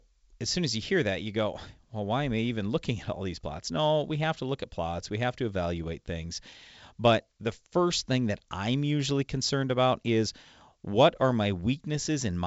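No faults found: the speech is carried in G.722 wideband telephone coding at 64 kbit/s, with nothing above 7.7 kHz.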